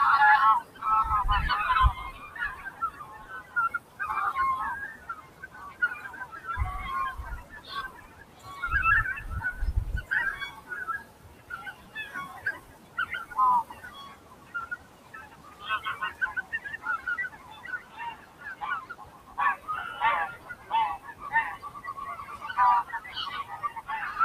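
The held parts of this recording of sounds keep sinking and swelling while sharp onsets punch through, so the whole clip pumps and thins out: a noise suppressor applied to music or sounds, built for speech, treats steady tones and decays as noise, with level swings of around 15 dB. Sound is cut by the noise suppressor, by about 9 to 10 dB, at 0.63–0.82, 2.12–4.0, 4.96–6.38, 7.43–8.47, 10.53–11.95, 12.59–12.97, 13.68–19.68 and 20.37–21.78 s, where sustained sound and tails are pulled down.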